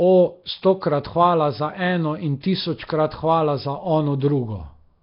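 Throughout the speech a rough, hissy halo clings to every syllable, with a smeared, underwater texture and nothing audible above about 5.3 kHz. This is heavy damage from what is likely Nellymoser compression, the old Flash microphone codec. It codes short blocks with a fixed, meagre bit budget, consistent with a rate near 22 kbps. Weaker bands get no bits at all and are filled with noise, which produces the hiss and the watery blur.

At 2.41 to 2.43 s, right after "hvala za eno in", a brief hiss leads into the next sharp onset, and the attack itself sounds softened. This is pre-echo. The codec spreads its quantisation noise across the whole block, so noise sized for the loud attack also spills into the quiet moment before it. Here it smears about 27 ms ahead of the onset.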